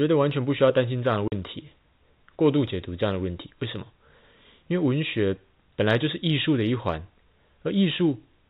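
Packet loss filled with silence hits this telephone-band speech at 1.28 s: the receiver substituted a 40 ms gap, consistent with two 20 ms packets going missing, so the speech drops out abruptly. The G.711 telephone coding stops everything above 4 kHz.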